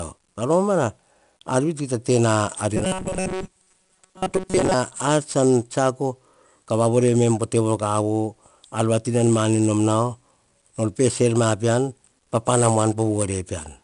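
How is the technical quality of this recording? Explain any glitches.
The recording has real problems: constant codec grit throughout, plus a stretch where the sound goes robotic.

The 4-bit ADPCM compression runs the whole way through. Each sample is coded as a coarse step from a prediction, so the error shows up as gritty hiss that rides on every loud sound and smears sharp attacks. Nothing comes through above 10.6 kHz, and the character fits a bitrate around 89 kbps.

From 2.77 to 4.74 s, just before "ar tsan tsiako ka", the sound turns into a rigid, metallic buzz at 188 Hz. The likely cause is repeated short buffers. Most of that stretch is the same roughly 5.3 ms chunk played over and over while the real audio gets skipped.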